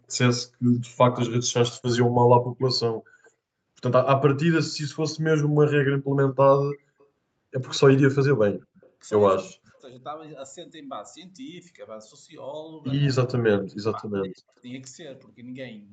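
An echo canceller at the far end, which likely played the call on a loudspeaker, let some of the returning signal slip through. Between 0.09 and 0.16 s a faint copy of the speech comes back about 217 ms late, very quiet at roughly 35 dB below the direct voice. From 0.85 to 1.53 s the two sides talk over each other. The canceller, likely unable to tell the local talker from its own loudspeaker pickup, clamps down on everything, and the speech dips by as much as 40 dB in broken patches over about half a second. The echo leak returns at 2.62 to 3.30 s and 6.73 to 7.04 s, a ghost trailing the speech by the same 217 ms. Double-talk suppression strikes again at 7.79 to 8.59 s, with speech gouged out in pieces. It is followed directly by leaked echo at 8.60 to 8.90 s. Further suppression follows at 9.39 to 10.03 s and 13.36 to 14.63 s, each time cutting into the speech for around 0.7 s, and all of it sits within an 8 kHz call bandwidth.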